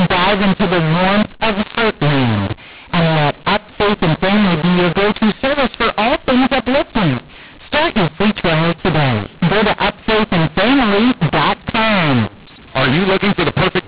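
Throughout, the speech has mu-law and A-law mixed up: A-law samples decoded as mu-law scramble levels, unlike clipping, harshly distorting loud parts and filling pauses with noise.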